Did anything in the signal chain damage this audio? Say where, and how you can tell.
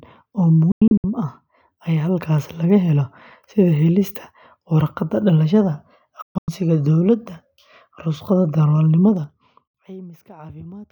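Yes. The speech is cut by a digital broadcast dropout at three places: 0.72 to 1.04 s, 6.22 to 6.48 s, and 9.68 to 9.75 s. This happened at the reception and decoding stage. The first two are clusters of short holes, not single gaps. The longest run is 96 ms in the first and 128 ms in the second. The hole lengths come in multiples of about 32 ms, which fits whole coded frames failing their check and being muted. Each mute ramps in about 3 ms. On a waveform these are flat, silent stretches with very short tapered edges. On a spectrogram they are clean, full-height blank columns.

There is also zipper noise from 9.06 to 9.89 s. It comes from a gain stage in processing or playback that steps the level without smoothing. The level falls by roughly 25 dB in 2 dB increments at about fifteen steps per second. You hear a fine ticking riding on the speech as it fades. On a waveform the envelope drops like a staircase, not a smooth slope. 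On a spectrogram each step leaves a thin broadband vertical line, evenly spaced across that stretch.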